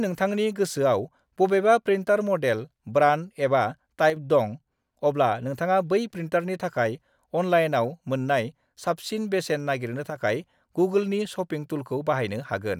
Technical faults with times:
4.10-4.16 one channel drops out
10.10-10.16 one channel drops out

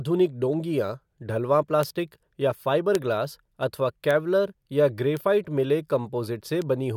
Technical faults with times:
1.83 bit error spike
2.95 bit error spike
4.11 bit error spike
5.17 bit error spike
6.62 bit error spike

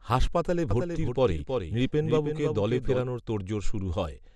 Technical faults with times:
0.00-4.35 MP2 compression
0.71-3.01 doubled audio track

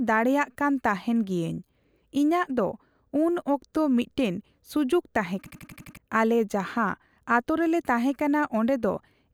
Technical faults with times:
5.46-5.97 system hang loop

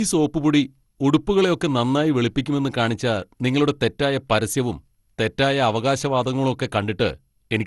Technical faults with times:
0.00-7.66 generation loss

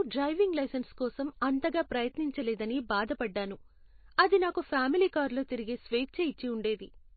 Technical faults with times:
0.00-7.16 MP3 compression

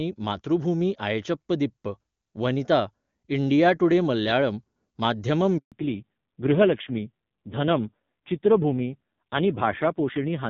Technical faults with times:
5.58-5.72 handover gap
5.72-10.49 fallback to narrowband

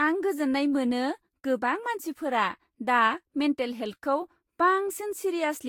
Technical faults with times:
0.00-5.68 generation loss

